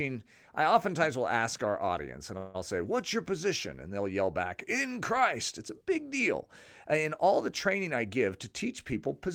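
Right after "ask our audience and", from 2.37 to 2.56 s, the audio stalls and the last sound is carried on as a buzz or hiss that fades, filling 168 ms without dropping to silence. This is a call audio freeze, likely caused by packets arriving late and the jitter buffer running dry. What separates it from a dropout is that the speech then resumes exactly where it stopped, so nothing is lost and everything afterwards simply lands 168 ms later.

After "all the training", from 7.96 to 8.53 s, comes a jitter buffer speed-up. The receiver had built up more audio than it wanted, so it trimmed tiny pitch-period-sized slices over and over, removing about 50 ms in total. The speech runs at 106% speed, which is enough to sound hurried. Unlike playback that is resampled faster, the pitch stays where it was, and only the pace changes.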